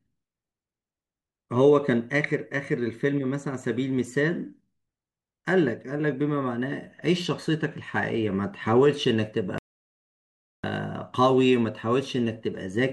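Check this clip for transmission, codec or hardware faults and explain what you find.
One fault is present. From 9.58 to 10.64 s there is an audio dropout to silence. The speech cuts to silence, with no room tone, for about 1.05 s. The input link was likely lost while recording continued.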